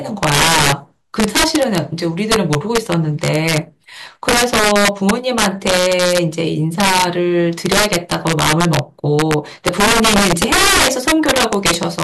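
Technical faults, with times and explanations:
Throughout: integer overflow. The speech is driven about 8 dB past full scale, and around three percent of samples exceed the limit. Those peaks wrap to the opposite extreme instead of being held. Each wrap snaps across the whole range, giving harsh cracks on loud syllables.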